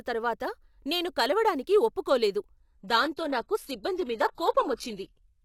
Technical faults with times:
2.57-5.44 adaptive stream at a lower bitrate

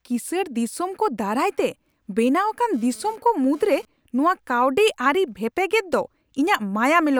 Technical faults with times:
2.74-3.85 GSM phone buzz

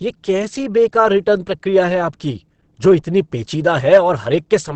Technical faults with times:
0.00-4.75 Opus compression

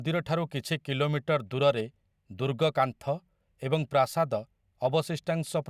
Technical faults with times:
none

